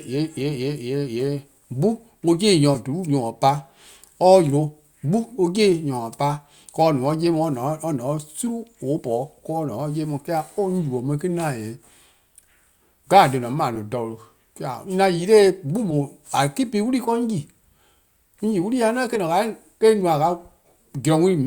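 Compressed frames skipped at 2.74 s, 8.98 to 9.01 s, 13.75 s, 15.90 to 15.93 s and 19.15 to 19.17 s. Whole 10 ms frames, about one to four at a time, never reach the output, so the speech jumps ahead at each join.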